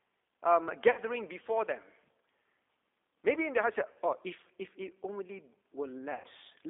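Throughout, the speech has been through the G.729 codec at 8 kbit/s. That coder rebuilds each 10 ms frame from a vocal tract filter, a pitch predictor and a few pulses, and the line carries only about 300 Hz to 3.6 kHz. The result is thin, band-limited speech with a plainly audible rough, synthetic texture.

From 0.91 to 1.00 s, packets dropped out and the decoder had to cover roughly 60 ms on its own, which fits three 20 ms packets. It repeats its last pitch and filter at falling gain, so the sound smears into a fading buzzy tone or coloured noise just before "before them". The same VoIP packet loss concealed by the speech codec returns at 3.93 to 3.97 s, about 20 ms or one packet, as a brief smear between "in their heart" and "oh if". A longer gap, about 100 ms, comes at 6.14 to 6.27 s. There the extrapolated sound decays audibly, and the speech stays weak and distorted for a moment after the packets return.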